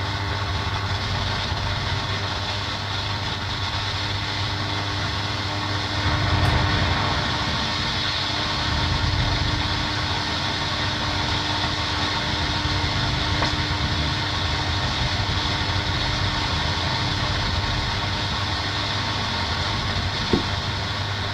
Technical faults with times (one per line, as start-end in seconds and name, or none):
none